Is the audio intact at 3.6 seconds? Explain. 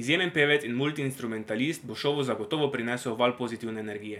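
Yes, the speech at 3.6 seconds plays through without any dropout, glitch or other audible fault.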